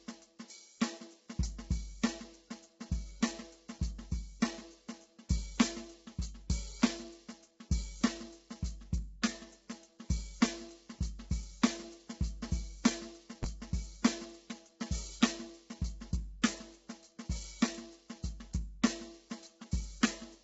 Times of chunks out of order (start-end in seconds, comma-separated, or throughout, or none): 13.43